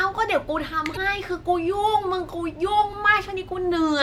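At 0.93 s a brief glitch cuts across the speech, lasting until about 0.97 s. It comes from damaged data in a compressed stream: corrupted bytes made the decoder misread those frames and lose sync until it locked onto the next valid frame header.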